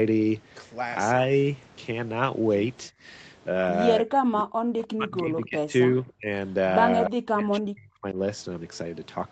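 From 2.91 to 3.03 s the background is gated by the echo canceller. For about a tenth of a second the room tone falls away by about 21 dB and then comes straight back. The canceller treated the loudspeaker signal as dominant and pulled the microphone down hard for that moment, so the gap is heard as a brief hole in the ambience rather than as a change in the speech.

From 4.04 to 5.73 s the speech is suppressed in double talk. Across roughly one and a half seconds the talker dips by as much as about 40 dB, thinning and breaking up in pieces. Within that stretch, at 4.83 to 4.87 s, a faint echo leak appears: a short, low-level copy of speech arriving about 294 ms late, far below the main voice. This is likely echo the canceller failed to remove while the far side was also talking.

The same pattern returns from 5.9 to 6.3 s, with the speech dropping by around 30 dB. A second echo leak falls inside it, at 6.08 to 6.13 s, with the same 294 ms delay and an even fainter level. 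Both are likely caused by the canceller confusing the two sides when they overlap.

Two more double-talk suppressions follow. At 7.08 to 7.16 s there is a brief cut of around 40 dB. From 7.33 to 8.17 s a longer stretch loses most of its level, by around 35 dB. In both the cause is likely the canceller clamping the talker's own speech along with the loudspeaker echo.

The top of the band stops at 8 kHz throughout, as expected on a wideband call path.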